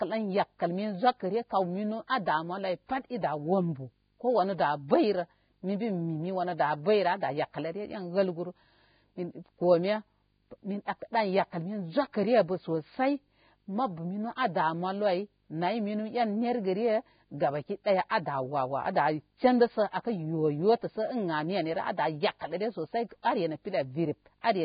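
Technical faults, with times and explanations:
Throughout, video or display buzz: a 50 Hz buzz with hash above it sits roughly 40 dB below the speech. A screen or video cable coupling into the audio path causes it, repeating at the picture's field rate. Its 15.6 kHz line-rate tone falls above the clip's 4.9 kHz limit and is not heard.
Throughout, Vorbis compression: the speech is hissy and grainy, with heavy damage, roughened tones, smeared attacks and nothing above 4.9 kHz. The likely cause is low-quality Vorbis coding, which fits a bitrate around 16 kbps. That coding lowers the cut-off and quantises the remaining treble so coarsely that its detail turns into noise.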